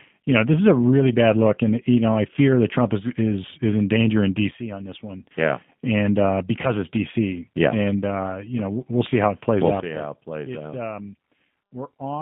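Throughout, the speech carries G.729 codec damage: the line is limited to roughly 150 Hz to 3.6 kHz and sounds rough and synthetic, as expected at 8 kbit/s. From 4.51 s to 5.31 s there is a sudden gain jump: speech and background drop together by about 12 dB, likely from a gain change applied without a ramp. At 6.62 s to 6.68 s, VoIP packet loss concealed by the speech codec shows up as a brief, fading smear. About 20 ms of audio is missing, which fits two lost 10 ms frames, and the decoder is still recovering afterwards. From 9.80 s to the end, a second sudden gain jump drops the level by about 15 dB.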